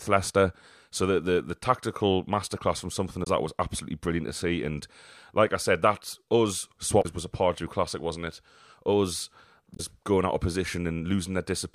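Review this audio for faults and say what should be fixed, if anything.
Damaged data in the compressed stream causes three short glitches: at 3.20 s after "tactical masterclass from something", at 6.99 s after "I said that us", and at 9.73 s. Each time the decoder misreads corrupted frames, loses sync and searches for the next frame header. Fix it by checksumming the stream and re-fetching any bad frames.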